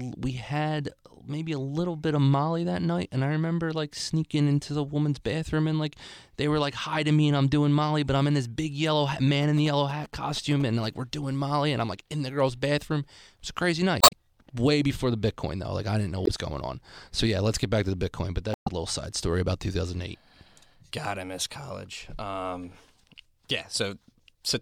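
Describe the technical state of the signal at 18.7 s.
Damaged data in the compressed stream corrupts the speech from 18.51 to 18.68 s, ending just before 18.7 s. Bytes in that stretch of the encoded file are wrong, so the decoder misreads the affected frames, loses its place and has to hunt for the next valid frame header before resuming. For about 0.17 s the audio becomes a short, unnatural burst in place of clean speech, and normal decoding picks up again right at "little side story about".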